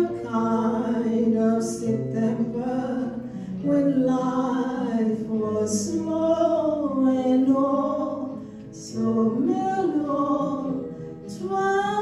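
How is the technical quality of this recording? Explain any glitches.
No glitches turn up anywhere here, so there's nothing to explain and the recording just runs without a hitch.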